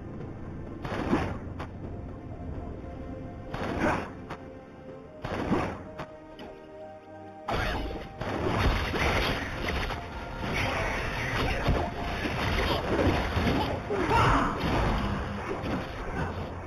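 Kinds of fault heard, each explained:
Imaging from linear upsampling: the sound was brought up to a higher rate by joining samples with straight lines, a crude interpolation filter. The band stops near 4 kHz, which fits a source at 8 kHz, and the top of that band is dulled. A mirrored copy of the spectrum sits between 4 and 8 kHz, roughly 20 dB down, adding a faint metallic shimmer to sibilant and bright high-frequency content throughout.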